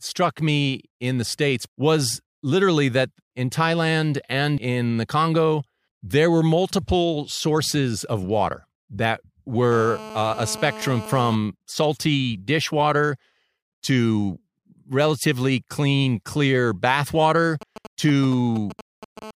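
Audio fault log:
9.72 to 11.35 s and 19.22 to 19.31 s, GSM phone buzz: after "sources of water that", a hard, raspy buzz at about 217 Hz with many harmonics sits about 14 dB below the speech, holding steady until "salty dishwater". A second, very short burst of the same buzz, about 15 dB below the signal, closes the clip. A nearby 2G phone in a call transmits radio bursts 217 times a second, and the audio circuitry rectifies them into this buzz, which is unrelated to the speech.
17.61 to 19.19 s, GSM signalling bursts: after "clean clear bath water", a galloping dit-dit-dit of short buzzes at about 217 Hz appears, roughly 15 dB below the speech. This is a 2G phone sending only brief groups of radio bursts while signalling to the network rather than carrying a call. The audio circuit rectifies each group, so the sound arrives as clusters of buzzes rather than a continuous tone.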